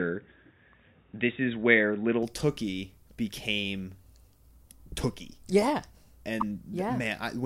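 From the start to 2.23 s the speech sounds dull and boxy, with nothing above 3.8 kHz, sitting about 5 dB away from the later level under a faint new noise floor, then clears abruptly with no gap. This is likely an input switched to a poorer device, a narrower-band microphone or headset path.

At 6.40 to 6.43 s a brief stutter replays a 24 ms fragment once. These are repeated frames, where a compressed block, apparently a single frame, was delivered twice, adding 24 ms to the audio.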